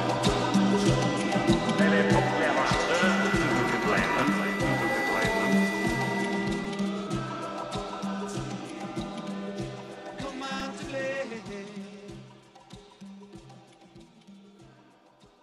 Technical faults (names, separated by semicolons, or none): repeated buffer